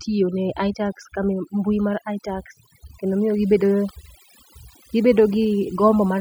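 From start to finish, the speech carries overdone noise removal: a noise reduction stage was pushed far too hard on a noisy recording, so any frequency band sitting close to its noise estimate gets pulled down or switched off entirely, and the quieter parts of the voice are swept out along with the noise. The pauses fall to near silence scattered with twinkling, chirpy specks.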